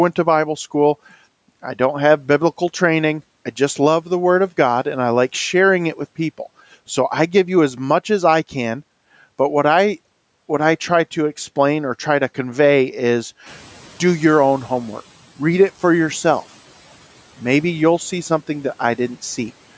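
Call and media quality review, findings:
Background noise jumps louder around 13.5 s and sinks back over roughly 1.6 s (13.46–15.03 s); noise suppressor catching up, its estimate lagging the 13 dB room-noise rise, then cutting about 8 dB.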